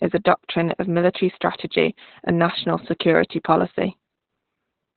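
Throughout the speech, Opus voice compression is heavy. Nothing survives above 4.3 kHz, so the sound is narrowband, muffled, hoarse and faintly robotic, which points to SILK mode near 8 kbps. Unlike a plain low-pass filter, the coarsely coded excitation adds that buzzy roughness.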